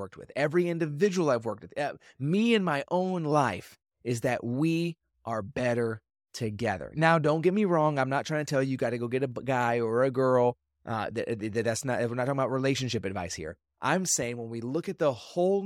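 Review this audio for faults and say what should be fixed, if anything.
Nothing to fix: no technical faults are audible anywhere in the speech.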